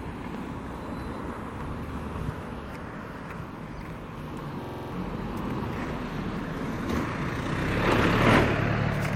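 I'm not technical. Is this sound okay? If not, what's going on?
No. Around 2.29 s, compressed frames were skipped: pieces of the file were missing or rejected, so the sound jumps ahead about a fifth of a second with a brief smeared blip.

From 4.64 to 4.92 s there is a system hang loop. The computer froze briefly while the sound hardware replayed one 46 ms snippet six times, causing a rapid stutter and losing about 0.3 s of sound.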